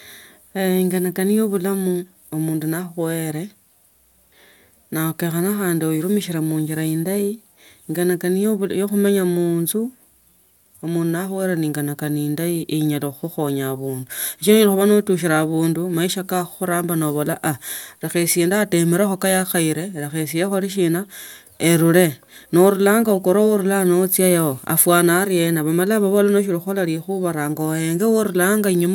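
Nothing goes wrong anywhere in this recording, so there's no technical fault to point to.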